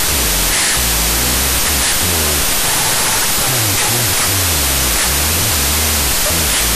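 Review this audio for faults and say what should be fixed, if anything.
Wrong sample width runs through the entire clip. The sound fits 32-bit float data read as 16-bit integers, so each sample becomes two mismatched values. Speech lies buried in loud broadband noise at half speed, an octave low, with an evenly filled spectrogram. Prevent it by storing the sample format in the file header and having the reader use it rather than a fixed default.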